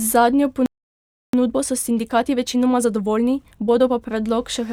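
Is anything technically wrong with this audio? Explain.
Yes. At 0.66 s the speech cuts to silence for about 0.67 s, until 1.33 s. This is a playback stall. The player likely ran short of data or had its thread blocked, so output stopped mid-flow.

From 1.33 s to 4.01 s the speech runs at 1.25 times normal speed. This is time-compressed catch-up. The player clears its backlog by cutting out small pieces and cross-fading the joins. Pitch stays normal, but delivery sounds hurried.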